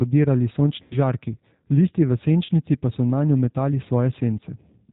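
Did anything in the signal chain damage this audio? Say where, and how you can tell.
Yes, at the codec stage. Throughout the clip the speech has the slightly rough, synthetic texture of the G.729 codec, with nothing above 4 kHz. The bandwidth and texture point to 8 kbit/s G.729A. The codec does not store the waveform. It models each short frame with a vocal tract filter, a pitch predictor and a few pulses, so the fine detail of the voice is lost and replaced by an approximation.

VoIP packet loss concealed by the speech codec occurs at the network stage, twice. The first is from 0.82 to 0.97 s and fits about 90 ms of missing audio. The second is from 2.45 to 2.51 s and fits about 40 ms. Each gap sounds like the voice smeared into a fading buzzy or noisy tone. The decoder repeats the last pitch and filter with falling gain until packets return. The voice stays weak or distorted briefly afterwards because each frame is built on the previous one.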